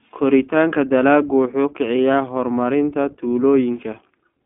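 From start to finish the speech runs through the iLBC codec, and you can plainly hear it. The band is phone-narrow, roughly 200 Hz to 3.5 kHz, with nothing above 3.7 kHz, so sibilants lose their edge. Because each short frame's excitation is coded on its own, the voice comes out slightly rough and synthetic. The frame size sounds like 20 ms, which fits the 15.2 kbps mode.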